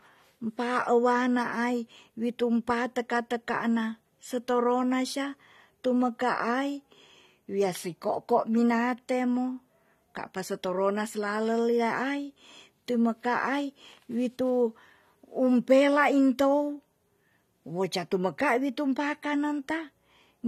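Speech, carrying plainly audible AAC compression damage from start to finish. Nothing sounds above about 14.5 kHz, so the top of the spectrum is cut off and sibilants lose their air. What remains has the dull, smeared quality of a lossy encoder quantising frequency lines too coarsely, with a warbling, fizzy texture on sustained sounds. The likely cause is AAC-LC at a low bitrate, and the damage fits something near 32 kbps.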